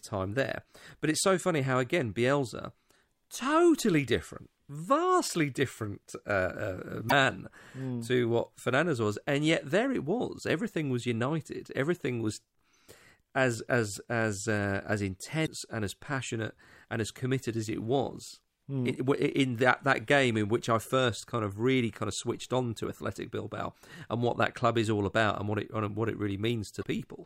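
Damaged data in a compressed stream interrupts the speech at 7.07–7.12 s, 15.43–15.48 s and 26.79–26.84 s, each lasting about 50 ms. Corrupted bytes there make the decoder misread frames and lose sync until it finds the next valid frame header.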